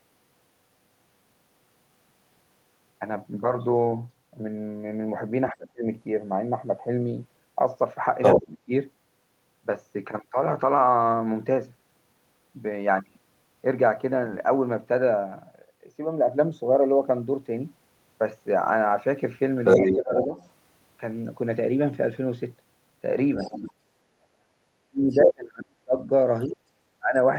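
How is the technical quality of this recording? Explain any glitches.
The recording has echo-control trouble wherever both sides talk at once.

Speech suppressed in double talk occurs at 5.51–5.87, 8.35–8.71, 19.79–20.39 and 24.31–27.16 s. The voice drops sharply, at worst by about 35 dB. The likely cause is an echo canceller turning down both talkers together.

The other side's voice leaking through appears at 8.22–8.57, 19.65–20.49 and 23.38–26.44 s. A second voice is heard, roughly as loud as the talker or louder. This is likely loudspeaker echo the canceller failed to remove.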